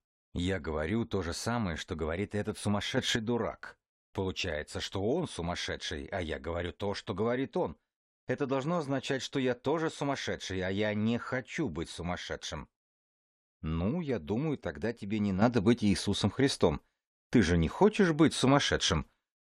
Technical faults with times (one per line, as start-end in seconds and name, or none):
2.97-3.16 sudden gain jump
15.42-19.46 sudden gain jump